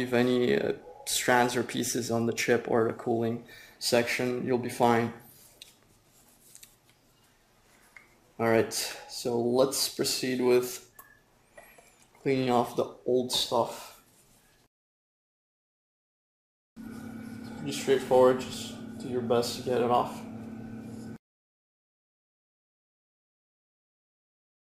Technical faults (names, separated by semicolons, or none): none